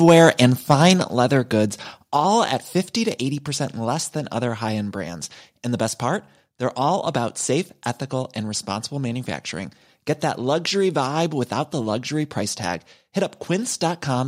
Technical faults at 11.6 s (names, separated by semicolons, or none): none